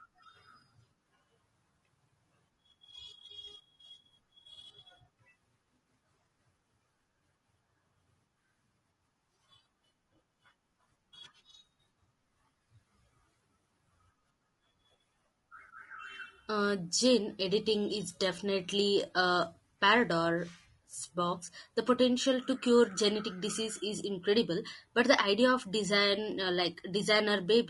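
Low-delay AAC compression runs from start to finish across the whole speech clip, likely from AAC-ELD, the codec common in video calls. Its short frames, about 10 ms each at 48 kHz, cannot separate the voice's pitch harmonics cleanly and spend more bits per second doing it. The damage is plainly audible: the voice sounds rough and grainy, with noise filling the gaps between harmonics and a thin, synthetic top band, which fits a bitrate around 32 kbps.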